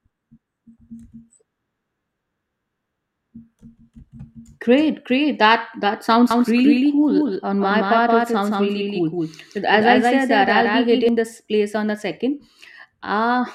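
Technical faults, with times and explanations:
6.31 to 11.09 s, doubled audio track: a second, full-band copy of the speech runs about a fifth of a second behind the original and somewhat quieter, roughly 5 dB down. It carries no decay or added room colour, so it reads as a stuttering double rather than an echo. It cuts in and drops out abruptly, starting just before "this place on the". The likely cause is the same signal captured again through a slower path and mixed back in.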